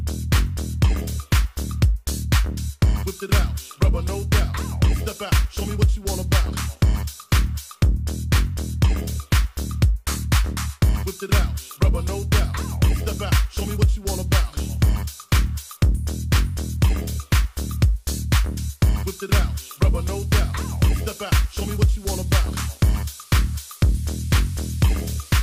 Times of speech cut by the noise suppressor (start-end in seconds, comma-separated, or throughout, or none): none